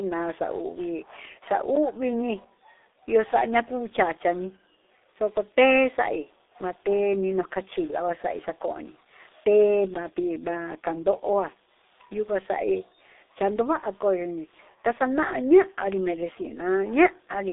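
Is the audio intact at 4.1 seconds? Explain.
No. At 4.1 seconds, as across the whole speech clip, the G.723.1 codec damage is heavy. The band is confined to roughly 300 Hz to 3.7 kHz, and the coarse coding fits a bitrate near 6.3 kbit/s. The codec rebuilds speech from a compact model refreshed only every 30 ms frame, so fine detail between updates is lost. The result is muffled and hoarse, with smeared consonants.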